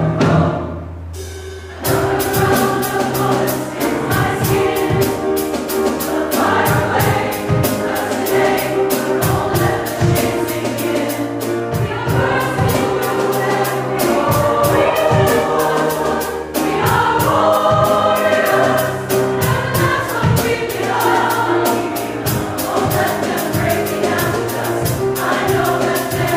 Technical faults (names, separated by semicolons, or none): none